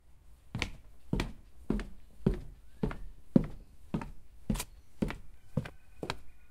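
At 1.66 s, 3.35 s, 4.63 s and 5.70 s the sound jumps forward, with no gap of silence between the two sides. Each jump is likely a dropped buffer (overrun), where the capture side didn't fetch its samples in time and they got overwritten. The first two skip a sliver, maybe a couple of hundredths of a second, and the last two lose more, with the final one missing something like 70 ms.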